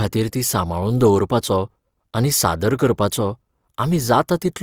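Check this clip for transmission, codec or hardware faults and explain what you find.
One codec fault runs through the whole clip: Opus compression. Throughout, starved bands are folded or noise-filled, which fits music-mode Opus likely near 24 kbps. The speech sounds plainly grainy and rough, and a spectrogram shows speckled, noisy upper bands running up to 20.2 kHz.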